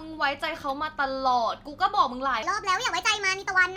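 Wrong sample rate from 2.43 s to the end of this speech clip: the final stretch is played back faster than it was captured, so it runs about 1.38 times too fast and sits about 5.5 semitones higher, sounding hurried and squeaky. That ratio fits 32 kHz audio played at 44.1 kHz without conversion.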